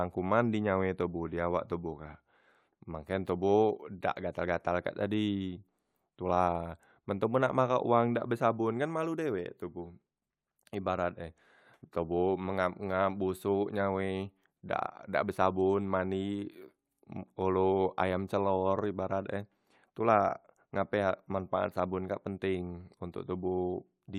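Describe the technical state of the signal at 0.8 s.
At 0.8 s the speech signal is intact, with no audible dropout, clipping, glitch or other technical fault at that moment.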